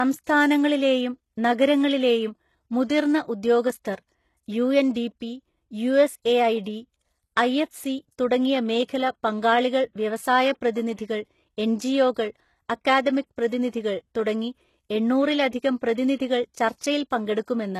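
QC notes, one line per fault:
Throughout: low-bitrate audio saved at a high bitrate. The speech has nothing above about 12.3 kHz and carries the artefacts of a heavily squeezed encode, even though the MP3 container looks generous, which fits a 192 kbit/s file. The likely cause is an earlier very low-rate encode, consistent with HE-AAC near 16 kbit/s. Unlike a plain low-bitrate MP3, the damage here belongs to the first codec, and the high rate restores none of it.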